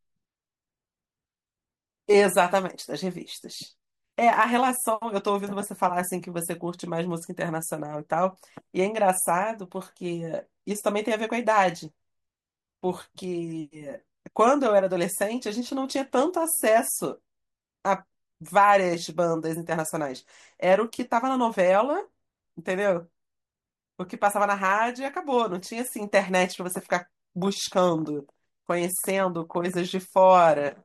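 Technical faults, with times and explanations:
No technical faults detected.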